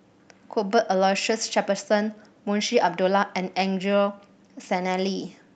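From 3.85 s to the end, a call bitrate drop roughens the speech, consistent with the encoder falling from 64 to around 28 kbps.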